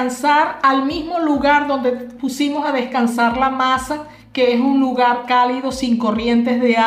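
No technical faults are audible anywhere in the audio.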